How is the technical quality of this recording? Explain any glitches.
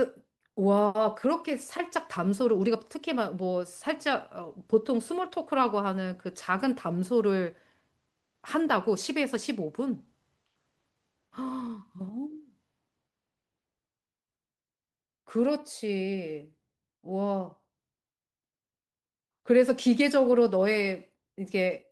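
No technical faults can be heard anywhere in this speech recording. There are no glitches to explain.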